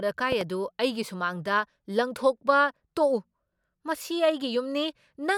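A speech recording with one problem near the very start: a loud pop, really two pops in quick succession, between about 0.32 and 0.43 s. They jump out at roughly 10 dB above the speech while the talking carries on underneath. That double hit is the likely signature of a voltage pulse getting into the chain, from a plug, a switch, static or a driver hiccup, with the downstream circuitry shaping it into a sharp thump.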